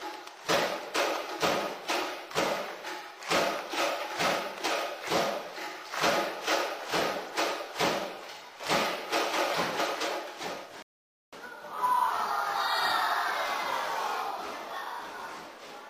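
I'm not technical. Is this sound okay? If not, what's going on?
No. At 10.82 seconds the sound drops to silence for half a second, then picks up exactly where it stopped. That's a rebuffering stall: the player ran out of downloaded audio.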